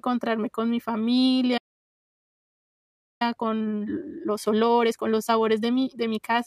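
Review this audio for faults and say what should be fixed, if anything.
At 1.57 s the speech just drops out, and nothing comes back until 3.22 s, a gap of about 1.6 s. That's a playback stall. The player most likely ran dry or had its output thread blocked, so it simply went silent until data arrived. Give the player a deeper buffer and keep its audio thread at high priority, away from blocking work.

From 3.22 s to 6.22 s the speech comes out hurried at 1.25 times normal speed but keeps its pitch. That's time-compressed catch-up: the player trims short slices and cross-fades across them to clear the backlog left by the stall. Fix the stall first, and cap the catch-up rate lower so any recovery stays gentle.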